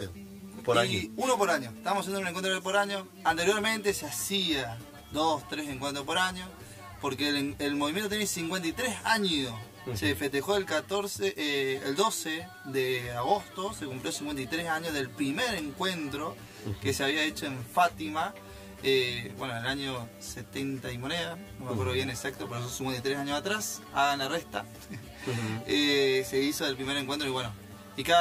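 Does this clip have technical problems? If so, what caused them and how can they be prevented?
Yes. Throughout, one channel arrives roughly 10 ms after the other, and the two are summed to mono. The result is channel delay (comb filtering): cancellations starting around 50 Hz and repeating about every 100 Hz leave the sound hollow and phasey. To prevent it, align the channels in time before any mono fold-down.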